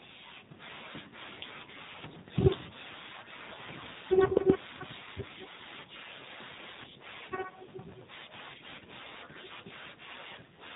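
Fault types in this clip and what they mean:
AMR narrowband mobile codec: speech sounds buzzy, synthetic and muffled, with nothing above 4 kHz, which fits AMR-NB at a low rate around 7.4 kbps.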